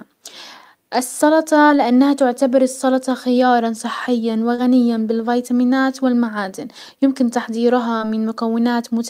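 Short concealed packet loss occurs at 1.67–1.78 s, just before "تعتبر السلطة خيارا صحيا", at 4.56–4.60 s, between "تعتبر السلطة خيارا صحيا" and "بالفيتامينات والمعادن يمكن", and at 7.98–8.02 s. Each time about 20 ms of speech failed to arrive and the receiver extended the preceding sound to cover it, leaving a brief smear rather than the hard silent gap of an unconcealed dropout.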